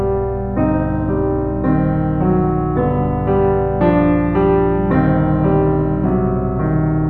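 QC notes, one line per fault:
Throughout, mains hum: a steady 60 Hz tone sits under the music at a high level, roughly 10 dB below it, as power-line current leaks into the signal path through a ground loop or a nearby transformer. On a spectrogram it shows as an unbroken horizontal line at 60 Hz running the full clip, with fainter lines at low multiples; in the waveform, quiet passages never reach true silence but carry a regular low-frequency ripple.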